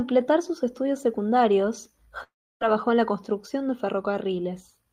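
Just after "sus estudios secundarios" at 2.23 s, the speech smears into a fading buzz, then drops to near-silence until 2.63 s, resuming at "en la construcción de" with about 0.38 s lost. This is likely a long network dropout, with the receiver extending the last sound before giving up.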